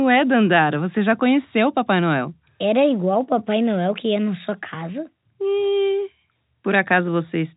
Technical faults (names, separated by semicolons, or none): none